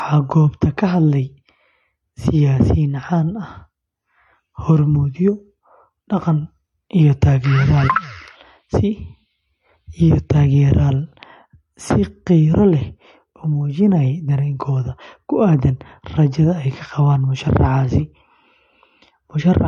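Throughout the speech nothing is heard above 11.9 kHz, and two distinct sets of coding damage overlap: MP3-style smearing together with the synthetic, swishy highs of HE-AAC. That stacking, rather than one codec's signature, points to transcoding between lossy codecs, likely MP3 re-encoded as HE-AAC.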